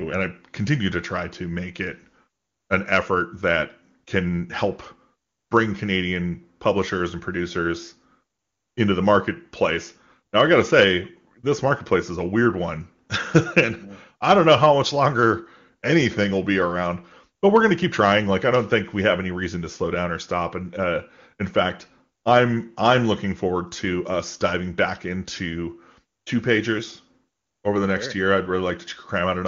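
No technical faults can be heard in the speech, which comes through the AMR wideband (HD Voice) codec with the band topping out near 7 kHz and, at most, faint coding colour, consistent with the codec's highest rate of 23.85 kbit/s.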